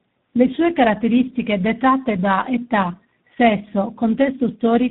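From start to finish, the speech carries tandem speech coding. The call was decoded and re-encoded at each network border, so each coder worked on the previous one's damage. The sound points to two speech coders in a row, fitting a low-rate 8 kbit/s coder followed by 32 kbit/s ADPCM. Nothing is left above 3.8 kHz. The speech sounds muffled and rough, with more warble than either coder alone would leave.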